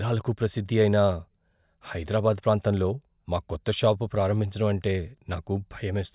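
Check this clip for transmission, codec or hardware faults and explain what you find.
Nothing to report: the speech comes through with no audible transmission, codec or hardware problem at any point.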